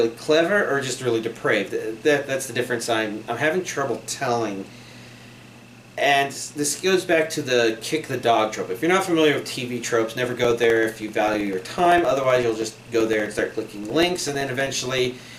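Periodic USB or driver dropouts run from 10.25 s to 15.31 s: a small slice of audio, around 2 ms, is lost every 0.064 s and replaced by silence, about seventy gaps in all. They come from the USB bus or audio driver being stalled at a fixed interval, so each gap cuts the waveform abruptly. The result is an evenly spaced ticking, roughly sixteen per second, audible wherever the sound is present.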